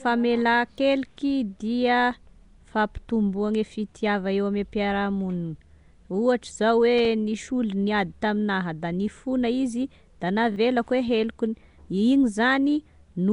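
Throughout the speech, the sound has a rough, hissy halo and a smeared, underwater quality, with nothing above 10.6 kHz. That codec damage is plainly audible, likely from Nellymoser compression, which codes short blocks at a fixed bit depth and fills weak bands with noise. The bitrate heard fits about 44 kbps.

From 0.76 to 0.78 s, and again from 10.52 to 10.56 s just after "da nifona izy da", a repeated buffer occurs. New audio arrived late, so playback reused the last block, which fits a 20 ms buffer. It plays once extra at first and twice extra later, giving a short stutter with hard joins.

From 6.98 to 7.05 s, loose connector crackle appears. A contact making and breaking rapidly chops the signal, producing an irregular burst of crackle lasting about 70 ms.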